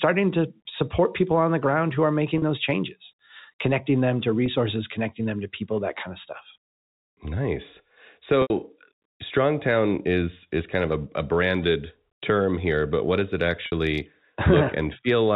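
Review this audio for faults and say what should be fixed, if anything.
Brief buzzy, held-note smears at 2.38–2.42 s after "the ground who are", 4.46–4.48 s after "changes connecting them to", 8.42–8.50 s, and 13.66–13.72 s after "but what does it". These are packet loss with pitch repetition: 20 to 80 ms of audio went missing, consistent with dropped 20 ms packets, and the receiver filled each gap by repeating the last pitch period. Fixing this needs a more reliable network path, a larger jitter buffer, or forward error correction so the lost packets are recovered.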